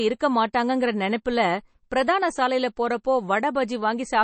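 Throughout, the speech has a hard treble ceiling near 8.3 kHz and a watery, swirling texture, likely MP3 compression at a bitrate consistent with roughly 32 kbps.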